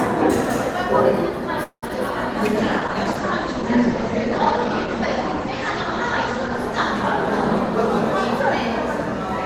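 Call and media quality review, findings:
Call audio freeze, 1.63 to 1.84 s: the sound stalls for about 0.21 s, the held sound fading into roughly 90 ms of silence, then picks up where it left off with nothing lost. Likely delayed packets draining the jitter buffer, so this is added delay.

Short concealed packet loss, 1.88 to 1.91 s: a brief smear right after the freeze. About 20 ms of real audio is gone and only a few ms is patched by extending the last sound before blending back, so the stream catches up a little.

Call bitrate drop, 2.59 to 9.12 s: the encoder falls from 48 to 11 kbps and bandwidth narrows from 20 kHz to 8 kHz. The sound goes coarse, watery and dull, bottoming out for about 3.7 s before the rate comes back up.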